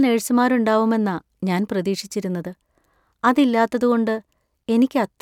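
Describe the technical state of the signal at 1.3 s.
At 1.3 s the speech signal is intact, with no audible fault at that moment.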